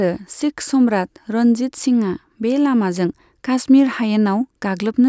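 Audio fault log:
No fault is heard in this speech clip.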